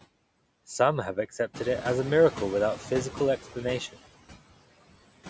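Noise suppressor artifacts run through the whole clip: the suppressor pulls down bands it judges to be steady noise by about 19 dB, frame by frame, so the residue sinks between phrases and swells under the speech.

Noise suppressor catching up from 1.53 to 2.82 s: the room noise jumps by about 11 dB around 1.5 s, and the suppressor's noise estimate trails behind, cutting only about 6 dB at first. The louder noise leaks through, then fades over roughly 1.3 s as the estimate adapts, against a call-band signal reaching up to 8 kHz.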